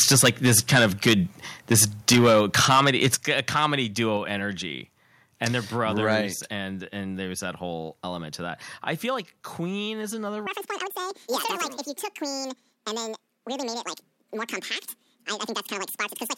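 A speech recording opens with microphone overload from 0 to 1.14 s and again from 1.71 to 3.66 s, peaking about 13 and 12 dB past full scale, with a brief recurrence at 6.11–6.15 s about 1 dB over. The loudest syllables crackle harshly, and the waveform shows flat-topped peaks (around a few percent of samples) that spray broadband energy up the spectrogram. This is likely an input gain set too high for the converter. A microphone volume stepped down occurs at 2.15 s (about 2 dB), 3.15 s (about 6 dB), 4.17 s just before "energy and they're brothers" (about 3 dB), and 6.21 s after that phrase and before "and and there's that" (about 4 dB). Voice and background drop together, and the waveform envelope shows a sudden stair-step, consistent with call software reacting to the clipped peaks. From 10.47 s, right after "is another", the section runs at the wrong speed, 1.94 times too fast and roughly ten semitones high. 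The sound is hurried and chipmunk-like, and the spectrogram shows harmonics shifted upward with features squeezed in time, most likely from playback against the wrong clock.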